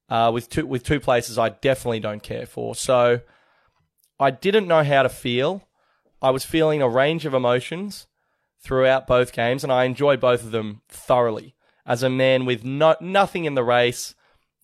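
Nothing here needs flagging, since the speech runs along without a single technical fault to point to.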